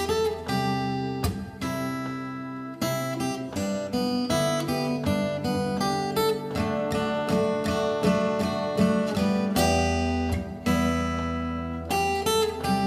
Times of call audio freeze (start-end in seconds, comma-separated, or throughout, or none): none